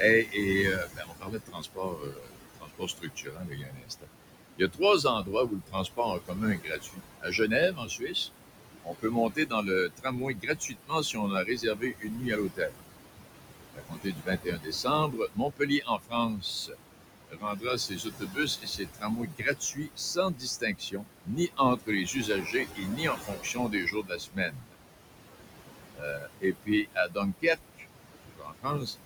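Noise suppressor artifacts run throughout: room noise, only about 8 dB under the speech, is pulled down by about 21 dB between phrases and rises again underneath them. Speech cut by the noise suppressor follows at 0.25–0.37 s (about 9 dB), then 0.76–4.09, 4.57–8.15, 8.82–12.86, 13.73–16.77, 17.28–24.76 and 25.92–28.95 s, dropping about 21–22 dB and swallowing quiet consonants and word endings.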